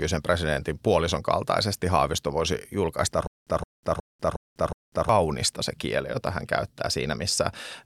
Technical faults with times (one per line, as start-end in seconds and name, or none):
3.27-5.09 stutter with silent gaps